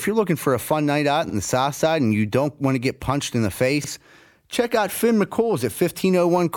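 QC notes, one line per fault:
1.30–1.34 s and 3.84–3.89 s, overlapping chunks: right after "fun night out in" and again after "get punched in the", just before "check out", about 48 ms of audio plays a second time, heard as a quick stutter with a click at the seam. Each 2.5 s chunk begins before the previous one has ended, so the overlap repeats at every join. Unlike a dropout, nothing goes missing. Sound is doubled instead, and the two joins fall about one chunk length apart.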